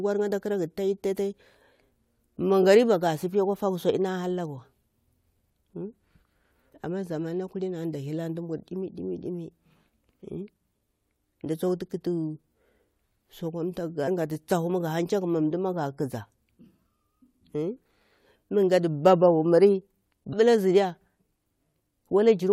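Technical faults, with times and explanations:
14.07 s and 20.32 s, damaged data in a compressed stream: each is a brief glitch lasting under 20 ms. A corrupted stretch of the encoded stream makes the decoder misread the affected frame and lose sync, so it outputs a short glitch until it finds the next valid frame header.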